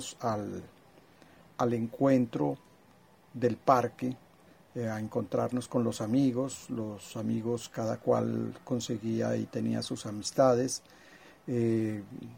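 No technical faults are audible.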